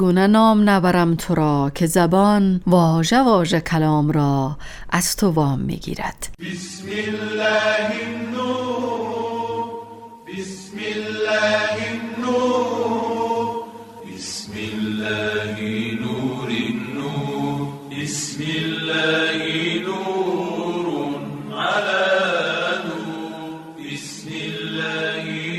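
No technical faults can be heard anywhere in the audio; the signal holds steady, with no gaps, distortion or interruptions at any point.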